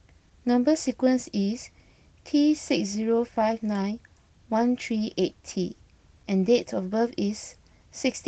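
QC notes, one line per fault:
No faults are present in this speech clip. The Opus voice compression is in its full-band hybrid mode, with only light coding effects audible, which fits a bitrate around 20 kbps.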